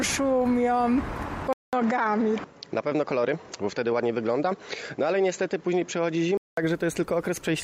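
From 1.53 s to 6.57 s the audio turns duller, with nothing above 7.6 kHz, a new background noise roughly 45 dB down and no real level change. The 200 ms silence at the switch and the changed noise floor mark it as likely an input switched to a poorer device, not a simple filter.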